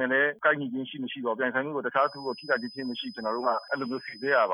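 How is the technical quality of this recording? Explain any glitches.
The recording has one clear fault: a feedback whistle. It starts at 1.93 s and runs to the end of the clip. A thin, steady tone at about 5 kHz sits behind the sound, roughly 20 dB below it, swelling and fading slowly in level. The likely cause is a loudspeaker-to-microphone loop held just at the edge of feedback. At that gain, one high frequency keeps ringing without growing into a full howl.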